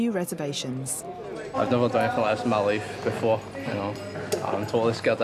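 Nothing in the audio catches the ear as a technical fault at any point, so there's really nothing to flag here.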